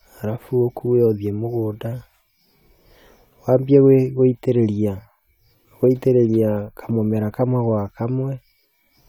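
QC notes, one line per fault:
No technical faults are present in the speech recording, and the signal holds steady with nothing that calls for correction.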